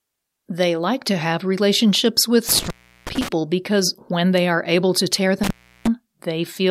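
Intermittent contact hits twice: after "to have relationships with" from 2.49 to 3.28 s, then after "are able to tear" from 5.43 to 5.87 s. The line drops open for about 350 to 360 ms each time, with crackle at the edges.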